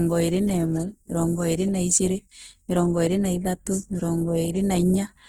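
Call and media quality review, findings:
Opus compression throughout: speech grainy and rough, band detail noise-filled, full bandwidth to 20.2 kHz; likely CELT-mode Opus near 16 kbps starving bands of bits.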